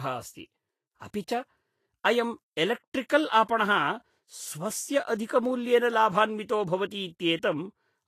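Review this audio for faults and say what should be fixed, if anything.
The speech was likely passed through a low-bitrate Vorbis encoder, and the Vorbis compression damage is plainly audible from start to finish. The encoder removed everything above 14.2 kHz and quantised the remaining treble residue so coarsely that fine detail turned into noise of similar energy. The result is a hissy, grainy top end, roughened tonal quality and blurred consonant onsets, which fits a bitrate around 32 kbps. Encoding at a higher Vorbis quality setting, or keeping a lossless master, would prevent this.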